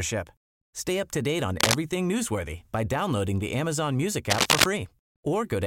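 Cable scratch noise hits at 1.60 to 1.75 s, after "up to date on", and at 4.30 to 4.68 s. Both are rough rustling bursts louder than the speech, likely from a worn connector being jostled.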